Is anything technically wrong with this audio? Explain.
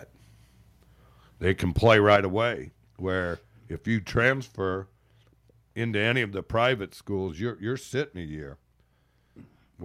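Yes, there are two linked problems in this speech clip.

From 1.77 to 2.16 s there is microphone overload, likely because the input volume was set too high for the converter. The loudest peaks go over its limit by about 2 dB, so their tops are sheared flat. Only around one percent of the samples are affected, but the loudest syllables in that stretch pick up a harsh, crackly edge.

At 2.16 s the microphone volume is stepped down, likely by the call software reacting to that clipping and lowering the device's input gain in a single move. The cut happens all at once rather than as a fade, and voice and background together drop by about 5 dB. The result is an abrupt dip in loudness right after the distorted peak.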